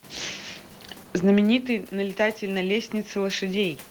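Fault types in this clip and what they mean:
Automatic gain rising: after the talker moves away from the microphone around 1.5 s, the input drops by about 12 dB, and the gain control climbs gradually by about 6 dB from 1.46 s to 3.87 s, lifting voice and room noise together in a slow swell.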